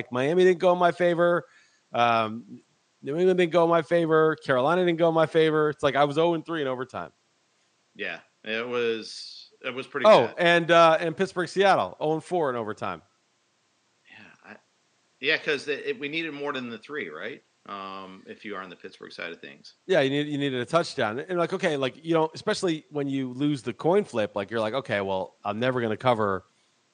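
No technical faults can be heard anywhere in the recording. Some room noise sits in the background, about 45 dB below the speech, as part of the space where the microphone was placed.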